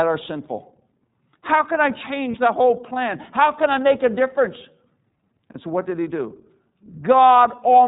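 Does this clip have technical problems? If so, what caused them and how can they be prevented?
Yes. The whole clip passed through the iLBC codec, a narrowband voice coder whose character points to its 13.33 kbps, 30 ms-frame mode. Nothing above 4 kHz survives, so the speech sounds plainly rough and synthetic. Negotiating a wideband codec such as Opus or G.722, when both ends support one, prevents this.

Lost iLBC frames occur at 2.31 to 2.35 s, between "can I" and "the whole plan", and at 5.52 to 5.55 s, just before "so what did he". Each gap is about 30 ms, which fits a single lost frame. The decoder filled each gap by repeating the last pitch cycle, giving a brief buzzy, held vowel before the voice recovers almost at once. A steadier network path, with adequate jitter buffering or forward error correction, prevents these drops.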